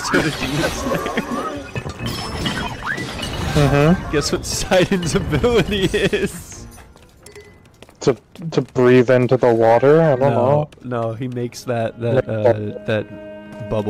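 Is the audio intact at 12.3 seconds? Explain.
Yes, the audio is intact at 12.3 seconds, with no fault at that moment.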